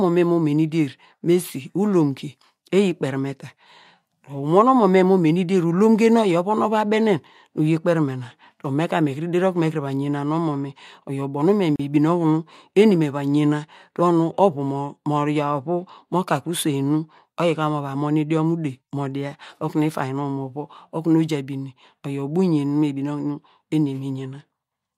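At 11.76 s the speech stops dead for about 36 ms, until 11.80 s, and then resumes exactly where it left off. This is a gap at a join of encoded pieces. Two separately encoded segments were butted together untrimmed, so the encoder's start-up delay and the padding of the last frame both remain as silence. Unlike a dropout from lost data, nothing is missing: no syllable is clipped or skipped, and the hard edges are smeared by the codec.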